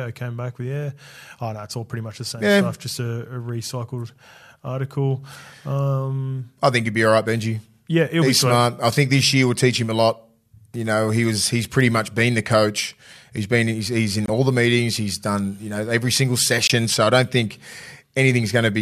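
At 14.26 s and again at 16.67 s the speech drops into abrupt silence for about 40 ms, a corrupt frame muted each time: the decoder rejected a damaged compressed frame, and the player substituted silence. Each gap fits a single frame, and timing stays intact.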